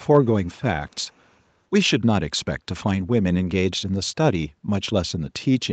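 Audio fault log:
0.44–0.48 s and 0.88–1.36 s, echo leak: a faint delayed copy of the speech trails the original by 203 ms, first as a brief scrap, then as a longer half-second stretch. It sits far below the direct speech, roughly 40 dB down, so it registers as a ghost rather than a distinct repeat. The likely cause is a far-end loudspeaker whose echo canceller let some of its microphone pickup through and sent it back.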